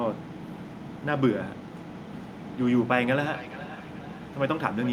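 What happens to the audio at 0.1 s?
Nothing goes wrong at 0.1 s; the speech is intact at that moment, with no dropout, click, distortion or other fault.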